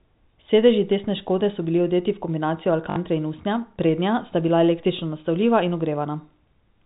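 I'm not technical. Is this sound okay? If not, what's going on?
No. At 2.9 s, right after "bili odeti v kombinacijo" and before "in usnja prednja sta", there is packet loss with the last packet repeated. For about 60 ms the sound drops out and the receiver keeps replaying its last short piece, which fits three lost 20 ms packets. It is heard as a brief robotic stutter, not a silent gap. The narrow telephone-style sound comes from normal G.711 phone coding.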